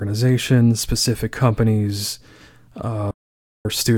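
At 3.11 s the speech cuts off abruptly into dead, total silence, with not even the room tone that sits under the rest of the recording, and it resumes mid-flow at 3.65 s. That is an audio dropout to silence lasting about 0.54 s, and whatever was said in that stretch is simply gone. The likely cause is a brief loss of the input signal, such as a link failure or momentary mute, while the recorder kept writing silence.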